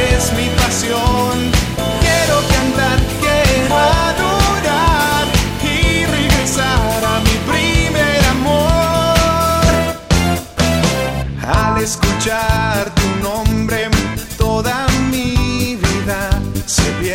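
No technical faults can be heard anywhere in this clip.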